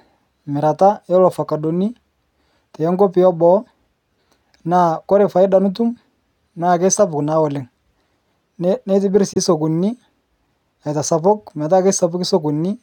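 At 9.33 to 9.37 s the speech cuts to silence for about 23 ms, then resumes as if it had played on: likely a Bluetooth dropout from one late, discarded packet.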